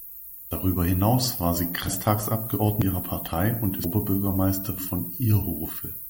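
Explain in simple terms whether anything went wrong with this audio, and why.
The speech jumps ahead five times, at 0.51, 1.88, 2.82, 3.84 and 4.78 s, each time with a bit of sound simply missing, around a tenth to a third of a second. That's likely a dropped buffer (overrun): the recorder fell behind and those chunks got overwritten.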